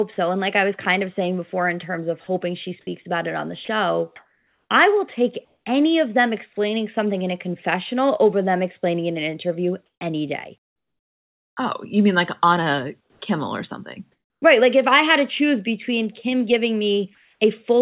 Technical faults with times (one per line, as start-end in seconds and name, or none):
2.85-5.66 sound chopped by the voice detector
9.86-11.57 comfort noise in place of the background
13.01-13.22 comfort noise in place of the background
14.12-14.42 comfort noise in place of the background
17.15-17.39 comfort noise in place of the background